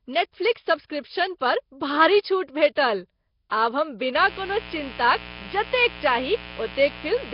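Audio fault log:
throughout: Nellymoser compression. The speech has a rough, hissy halo and a smeared, underwater feel, with nothing above 5.3 kHz. Damage this heavy is likely down to Flash's old Nellymoser Asao codec, which spends too few bits and fills starved bands with noise.
4.15 s to the end at 7.34 s: mains buzz. Right after "आब हम" a steady, raspy buzz kicks in, about 15 dB under the speech. It's a stack of 60 Hz harmonics from switching spikes twice per mains cycle, from a dimmer, rectifier or missing shield.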